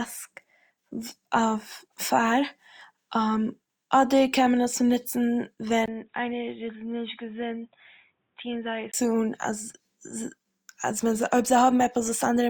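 At 5.86 s the speech drops out for a gap of about 20 ms, then returns dull and boxy, with nothing above 3.8 kHz. It is noticeably quieter, by roughly 10 dB, and carries a faint new background noise well below the signal. At 8.94 s the full, brighter sound returns. The likely cause is an input switched to a poorer device, a narrower-band microphone or headset call profile with its own level and noise floor.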